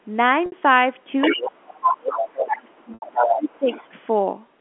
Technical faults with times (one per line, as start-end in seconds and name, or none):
0.46-0.52 packet loss with pitch repetition
1.21-1.46 other side's voice leaking through
1.35-3.67 speech suppressed in double talk
1.81-3.90 other side's voice leaking through
2.94-3.02 packet loss with pitch repetition